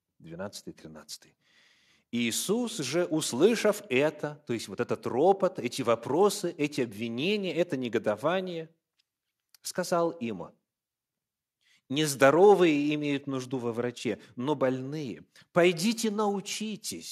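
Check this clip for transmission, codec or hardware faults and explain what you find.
Nothing in the speech points to a transmission, codec or hardware fault.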